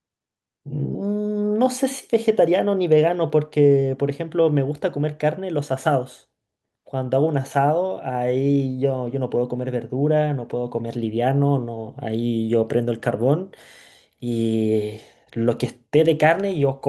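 No technical faults can be heard anywhere in the recording; the speech signal stays intact and continuous throughout.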